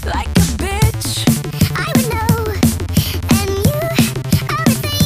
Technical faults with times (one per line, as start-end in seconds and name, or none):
1.27-5.05 section at the wrong speed